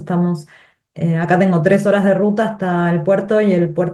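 Nothing here needs fixing: it's a short speech recording, and the Opus voice compression it went through leaves only the lightest touch, in keeping with a fullband hybrid setting at around 24 kbps.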